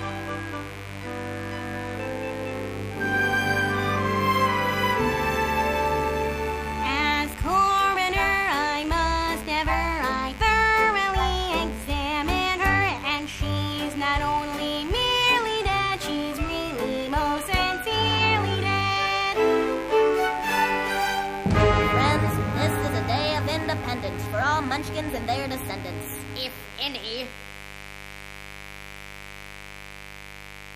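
A mains buzz runs from the first second to the last. It sits roughly 15 dB below the main signal, so it is plainly audible throughout. The hum is built on 50 Hz. Sharp switching spikes entered the signal path twice per mains cycle, probably through a dimmer, a rectifier or a poorly shielded cable. Those spikes carry harmonics far up the spectrum, into the kilohertz range. The result is a steady, raspy buzz rather than a smooth hum.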